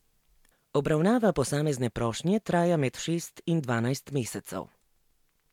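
A short speech recording with nothing technically wrong that can be heard, so there are no times or causes to report.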